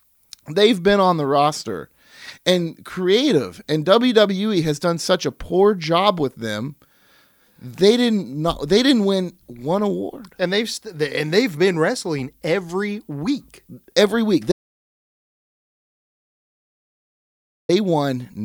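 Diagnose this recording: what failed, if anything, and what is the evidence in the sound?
The failure is an audio dropout to silence at the capture stage. From 14.52 s to 17.69 s the speech cuts off abruptly and the signal falls to silence, with no room tone, for about 3.17 s. This likely points to a lost input link or mute while the recorder kept writing samples.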